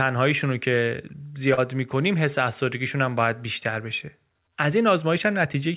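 At 1.54 to 1.59 s, short concealed packet loss: 40 ms of the call arrived too late, so the receiver extended the preceding speech across the gap, leaving a brief smear.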